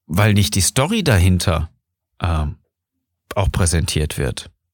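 No audible faults are present anywhere in the recording, with no interruptions, level jumps or added noise to point to.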